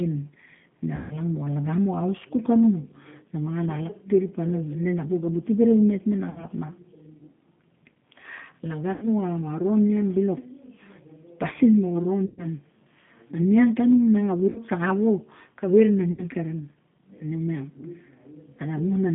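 The whole clip of speech runs through the G.729 codec at 8 kbit/s, and the damage is easy to hear. Everything sits in a narrow line band from about 150 Hz to 3.5 kHz, and because the decoder rebuilds the speech from a vocal tract model plus a handful of pulses per frame rather than from the waveform itself, it comes out rough and slightly synthetic, though still intelligible.

On top of that there are six dropouts where VoIP packet loss was concealed by the speech codec. The first comes at 0.95 s, right after "ne a", with about 150 ms lost. The others are at 6.30 s (60 ms), 8.93 s (90 ms), 12.26 s (120 ms), 14.50 s after "niang tanung miang a" (60 ms), and 16.12 s after "wo kave rana" (60 ms). Each time, the decoder keeps extending its last pitch and filter with falling gain, so you hear a short buzzy or noisy smear that fades. The speech stays weak or distorted just after each gap while the decoder recovers.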